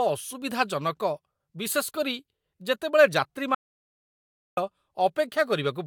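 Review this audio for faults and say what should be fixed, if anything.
An audio dropout to silence runs from 3.55 s to 4.57 s. It cuts the speech off mid-flow for about 1.03 s with no room tone left. The input was likely lost while silence kept being written, so the waveform goes flat and the spectrogram shows a blank vertical band. Securing connections and monitoring the input live during recording would prevent it.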